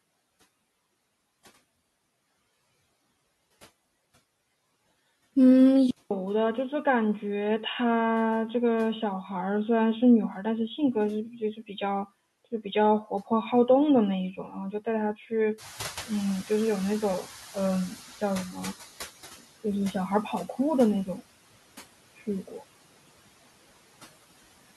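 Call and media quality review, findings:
Noise suppressor artifacts, whole clip. Background pulled down by about 15 dB, band by band, frame by frame. Residual noise dips between phrases and swells under the speech.

Input switched to a poorer device, 5.91 s to end. A 200 ms silence, then the audio runs dull and boxy. The new noise floor sits well below the signal, and loudness is roughly unchanged. Likely cause: capture moved to another microphone or a headset's call profile with a narrower band.

Speech cut by the noise suppressor, four spans: 10.34–13.31 s (drops up to about 14 dB, roughly half a second affected), 14.32–18.58 s (up to about 17 dB, under a second), 19.37–21.21 s and 22.18–22.63 s (up to about 17 dB and 11 dB, brief). Soft consonants and word endings misread as noise and attenuated with the background, so they sound swallowed or faint.

Noise suppressor catching up, 15.58–18.85 s. 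Room noise jumps by about 18 dB near 15.5 s and ends up about 18 dB below the speech. The rise itself is genuine room noise, not a fault. The suppressor's noise estimate lags, so the louder background first passes under-reduced, then sinks over 3.27 s to about 12 dB of reduction as the estimate converges.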